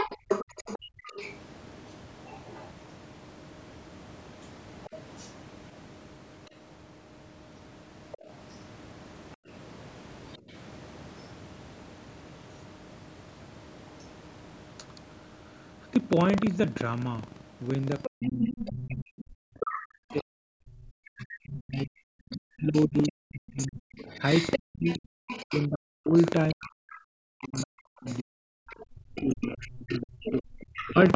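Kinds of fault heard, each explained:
Buffer tearing: The writer and reader of the audio ring buffer have slipped, so a small slice of each period replays sound from about 150 ms earlier. This gives a steady rattle near 23.4 Hz, which fits a 2048-sample buffer. The waveform shows hard splices every 43 ms wherever there is signal.
Other side's voice leaking through: A second voice sits under the talker, likely loudspeaker echo that the canceller left behind. It is strongest, at about 10 dB below the speech, from 0 to 2.67 s and from 18.04 to 30.91 s, and fainter near 4.4, 8.1 and 10.3 s. A spectrogram shows a second, unrelated harmonic pattern.
Background gated by the echo canceller: From 0.79 to 1.03 s the canceller clamps the microphone, and the room sound falls by up to about 29 dB for roughly a fifth of a second. The waveform's noise floor collapses briefly, and the spectrogram shows a dark vertical gap.
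Speech suppressed in double talk: While both sides talk, the talker's voice dips and breaks up, likely because the canceller cannot tell it from the echo. This happens briefly between 9.37 and 10.54 s, and for around 10 s in total between 18.07 and 30.99 s, by up to roughly 40 dB. The waveform shows chopped notches, and the spectrogram thins in the upper bands.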